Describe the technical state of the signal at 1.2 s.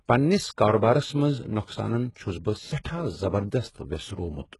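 At 1.2 s the signal shows the same damage present across the whole clip, most likely from HE-AAC compression at a very low bitrate, around what a 12 kbps stream would give. Only the lower spectrum is coded properly; the treble is rebuilt by copying lower bands upward under a coarse envelope, and everything stops near 11.5 kHz. The result here is heavy: sibilants sound gritty and metallic, and the upper harmonics of the speech don't line up with the body below.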